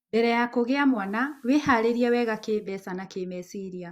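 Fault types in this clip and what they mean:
Digital radio blending to analogue: The receiver loses its digital stream and cross-fades, over about 340 ms, to the FM broadcast of the same speech. Hiss rises, roughly 40 dB down. Level shifts by about 2 dB, then returns near 2.7 s.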